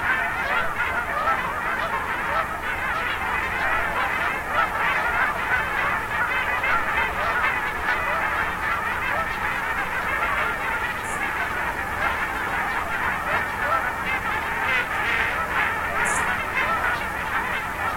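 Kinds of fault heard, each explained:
Periodic clock jitter: A rough, metallic edge rides on the sound for the whole clip, harshest on the brightest parts and gone whenever the sound drops to silence. The converter's sampling clock is being shaken at a steady rate of around 500 Hz, so every component of the sound picks up sidebands about that far above and below it, and the higher the component, the stronger those sidebands become.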